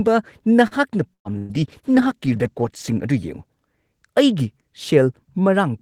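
A short stall from a late packet at 0.67 to 0.74 s holds the speech for about 38 ms while the receiver waits, then resumes from the same point with nothing lost. A burst of packet loss at 1.13 to 1.28 s drops about 120 ms; the last sound is stretched and faded toward silence, and the speech picks up further on. From 1.37 to 3.18 s, a call bitrate drop cuts the encoder from 32 to 15 kbps for about 1.7 s at its lowest, so the speech turns coarse and muffled until it recovers. A second burst of packet loss, at 1.38 to 1.52 s, removes another 120 ms, filled by a held, fading continuation.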